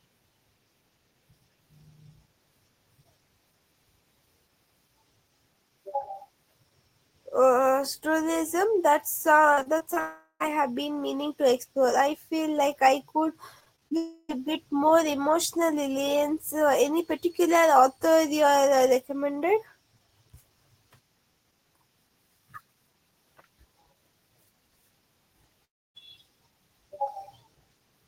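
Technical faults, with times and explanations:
9.53–9.98 s and 13.60–13.93 s: repeated packet loss (robotic sound). Each stretch has five short holes, none longer than about 35 ms in the first or 26 ms in the second, and roughly 28–29% of each span is patched by repeating the last bit of sound. The speech turns choppy, with pieces missing. On a spectrogram these stretches show small smeared or repeated blocks where harmonics freeze briefly. On the waveform the envelope stutters, with abrupt joins at each patch.
10.00–10.42 s: long network dropout. About 400 ms of audio never arrived, likely because the network stream stalled. The receiver stretches the last sound into a fading buzz, and roughly the final 50 ms is near-silent before the speech resumes with the lost part gone. A spectrogram shows a frozen, decaying smear of the last frame, then a dark gap. The waveform tapers toward flat.
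13.97–14.31 s: long network dropout. This one directly follows the second choppy stretch, and about 320 ms is lost, likely from another network stall. Here the filled-in buzz covers the whole gap with no clean silence, so the sound carries a droning, frozen quality until the speech returns abruptly. On a spectrogram it appears as a smeared horizontal band. The waveform shows a steady, slowly decaying envelope.
25.65–25.97 s: long network dropout. Roughly 300 ms is missing, likely from a network interruption. Only a brief concealment tail is heard, and then about 280 ms of near-silence follows before the speech picks up past the gap. A spectrogram shows a short smear of the last frame and then an almost empty column. On the waveform the trace drops to nearly flat, then jumps back.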